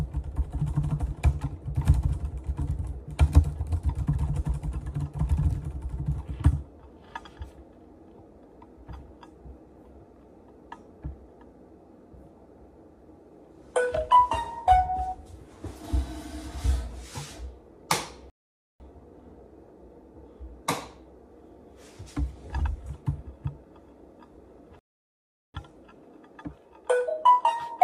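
At 18.30 s the audio drops to silence for about 0.50 s, then picks up exactly where it left off. This is a rebuffering stall: the player exhausted its downloaded data and waited for more. A second stall at 24.79 s adds 0.75 s, again with nothing lost.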